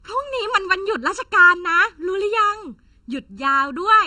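Hollow, phasey speech runs through the whole recording, with the tone thinned by fixed notches that never move. This is channel delay causing comb filtering. One channel arrives a little under a millisecond behind the other, and when the two are summed to mono the shared content cancels at evenly spaced frequencies. The first notch falls around 700 Hz, with further notches repeating at regular intervals above it, which produces the steady, tubby coloration.

The speech is also band-limited. Nothing is present above 10.3 kHz from start to finish, and the texture still carries the artefacts of an earlier low-bitrate encoding even though the file is MP3 at a generous size. That pattern points to low-bitrate audio saved at a high bitrate, likely an AAC-LC encode at around 32 kbit/s re-saved as roughly 248 kbit/s MP3. The second pass cannot restore the missing top end or undo the earlier codec damage, so the larger file carries the same losses.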